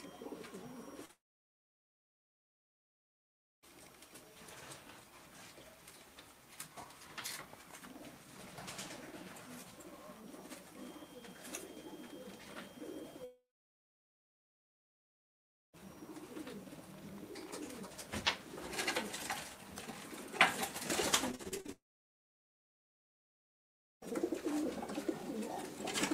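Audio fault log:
1.05 s, short concealed packet loss: roughly 40 ms of audio failed to reach the decoder in time, and the receiver bridged the hole by extending the preceding sound, pitched if voiced and as shaped noise if not, before blending back into the real signal. The result is a brief smear or wobble at that point, and it leads straight into the long dropout that follows.
1.11–3.65 s, 13.25–15.80 s and 21.72–24.04 s, long network dropout: each time the sound continues briefly as a fading buzz or hiss, then gives way to silence or a low steady noise lasting about 2.4 s, 2.3 s and 2.2 s respectively. The audio resumes further on with that stretch gone, which likely means nothing arrived from the network for roughly 2.3 to 2.5 seconds and the receiver could only conceal it briefly.
21.31–21.70 s, repeated packet loss (robotic sound): seven separate holes fall within under 0.4 s, the longest 39 ms, so about 43% of the span is patched rather than real. 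Each gap is filled by stretching the last sound, and the next gap arrives before the signal settles. This produces a choppy, robotic texture with pieces missing, and it runs directly into the third long dropout.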